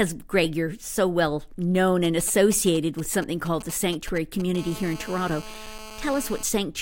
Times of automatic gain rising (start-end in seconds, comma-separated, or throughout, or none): none